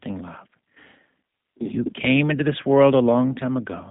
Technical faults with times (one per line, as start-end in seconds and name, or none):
0.00-3.90 G.729 codec